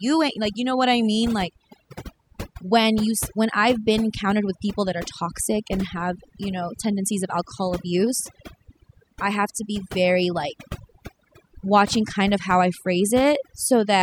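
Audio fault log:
Throughout: overdone noise removal. The noise reduction was set too hard. Bands near its noise estimate are cut, leaving twinkling specks.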